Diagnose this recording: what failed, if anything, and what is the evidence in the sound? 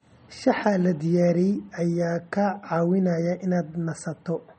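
Across the whole clip the speech has a dull, band-limited top with nothing above 8.4 kHz, and the coding damage is plainly audible throughout. The fault sits at the codec stage and is likely MP3 compression at a low bitrate, which fits roughly 32 kbps. Short of bits, the encoder cut off the treble at a fixed frequency and dropped weaker spectral lines. Their frame-to-frame switching leaves the speech sounding processed.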